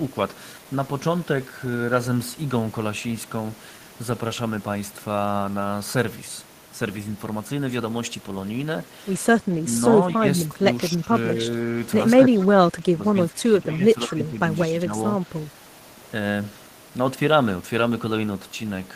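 Speech suppressed in double talk occurs at 9.59–9.66 s, 10.15–11.13 s, 12.15–14.38 s and 14.84–14.95 s in this speech recording. The level dips in patches, by around 20 dB at the first, roughly 15 dB in the middle two, and only slightly at the last. The likely cause is an echo canceller that, with both sides talking at once, could not tell the near talker from the loudspeaker return and turned both down. Echo leak appears at 14.09–14.15 s as a brief delayed copy of the voice, 214 ms behind and roughly 20 dB quieter, most likely loudspeaker sound that the far end's canceller failed to remove and sent back.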